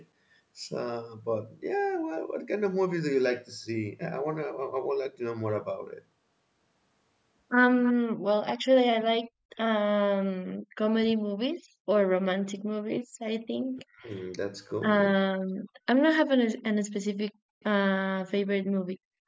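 A recording of speech with a faint delayed copy of the talker from 7.83 to 7.93 s, trailing by about 309 ms and around 15 dB quieter, likely an echo leak from a loudspeaker the echo canceller failed to fully cancel. The talker's voice then dips sharply, as deep as about 40 dB, at 10.57–10.70, 11.14–11.29, 13.75–14.09, 15.35–15.42, 17.35–17.64 and 18.00–18.60 s. These pieces of speech are likely suppressed in double talk, the canceller turning everything down while both sides spoke. At 19.20 s the room sound drops out by about 40 dB for roughly 70 ms until the end, because the echo canceller gated the background while the loudspeaker played.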